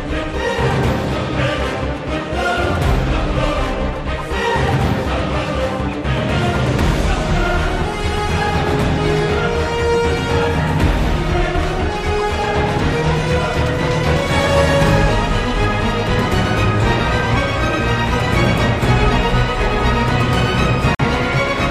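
Right near the end, from 20.95 to 21.10 s, there's a corrupt frame muted dropout: the audio cuts abruptly to silence for about 0.15 s, which points to roughly three damaged compressed frames the decoder rejected. The player filled the gap with silence and timing holds afterward.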